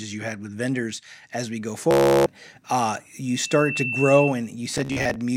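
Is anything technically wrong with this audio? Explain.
Yes. Bluetooth stutter hits at 1.91–2.26 s, after "vendors as we go", and scattered across 4.72–5.16 s. Late packets make the receiver replay short slices, a buzz rather than silence, with the sound resuming later as if it had played on. A loudspeaker feedback squeal at 3.26–4.36 s is a steady 2.7 kHz tone from the mic re-amplifying the speaker. Unlike a fixed interfering whine, it swells over about half a second to roughly 5 dB above the speech.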